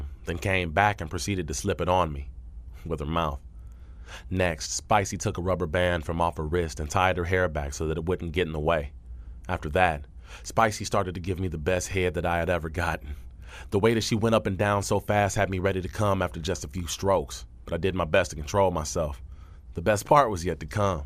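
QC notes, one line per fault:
Nothing to flag here; the speech comes across steady and intact all the way, with no problems worth a line.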